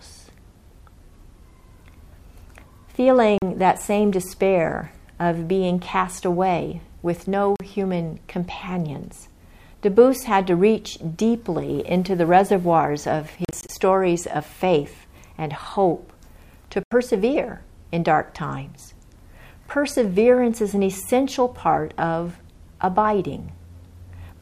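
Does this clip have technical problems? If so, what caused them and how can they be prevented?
Yes. Audio packets likely arrived late over a Bluetooth link and were discarded, causing Bluetooth dropouts: silent gaps at 3.38 to 3.42 s and 7.56 to 7.60 s (40.6 ms each), scattered holes totalling 101.6 ms across 13.45 to 13.69 s, and 81.3 ms at 16.83 to 16.92 s. Each time, the sound resumes further along, as though it had kept playing. Keeping the source close, with clear line of sight, and away from crowded 2.4 GHz traffic would prevent this.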